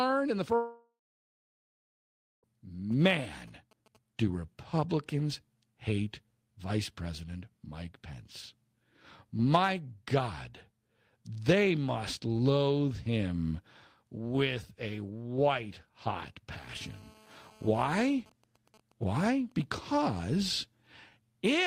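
After "in the", from 0.55 to 2.46 s, the speech cuts out, likely a long network dropout. The last sound fades as a brief buzz or hiss, then about 1.5 s of silence, and the speech resumes past the missing part. From 2.92 to 3.97 s, GSM signalling bursts come in. They sound like galloping ticks and short 217 Hz buzzes, about 30 dB below the speech. After "with a white hot", from 16.52 to 18.14 s, a GSM phone buzz appears. A nearby phone on a call produces a steady, raspy 217 Hz buzz, about 28 dB down. From 18.20 to 19.64 s, a phone sends GSM signalling bursts while its user is silent in the call, heard as even ticks with a longer buzz twice a second.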